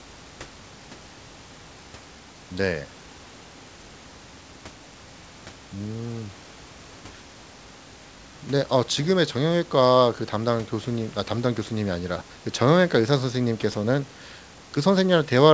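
No technical faults occur at any point in the speech.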